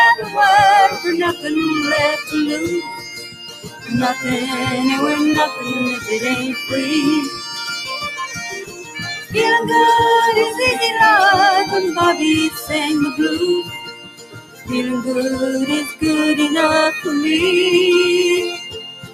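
A noise suppressor applied to music or sounds runs throughout. A speech-oriented suppressor treats steady and decaying material as noise, so level swings by around 10 dB as it ducks held sound and releases on attacks, giving a pumping, thinned-out character. Sound cut by the noise suppressor is heard at 0.21–0.36 s (about 6 dB down), 2.81–3.91 s (about 12 dB), 8.58–9.01 s (about 10 dB), 9.18–9.36 s (about 11 dB), 12.5–12.71 s (about 9 dB), 13.63–14.72 s (about 16 dB) and 18.53 s to the end (about 14 dB). In each stretch the suppressor judges sustained content to be noise and pulls it down harder than its surroundings, sinking held portions and cutting decays short.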